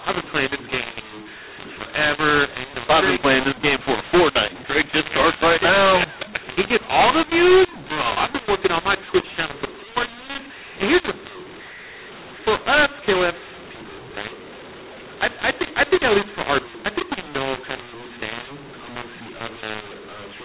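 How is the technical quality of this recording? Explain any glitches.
Poor: the speech is harsh and distorted from start to finish within the narrow telephone band, which tops out at 4 kHz. Throughout the clip, levels are scrambled, loud and soft parts land at the wrong sizes, and the pauses fill with a gritty noise floor instead of silence. This is a mu-law and A-law mix-up: the audio was coded with G.711 mu-law but decoded as A-law. Because the two logarithmic curves differ, every 8-bit code maps to the wrong amplitude, which distorts the waveform and lifts the quietest samples well above zero.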